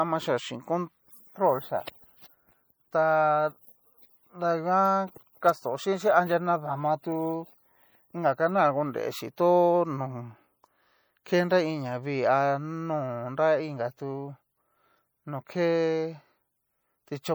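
Throughout, the speech carries plainly audible MP3 compression: watery swirling on sibilants and smeared onsets, which fits a likely bitrate of about 64 kbps.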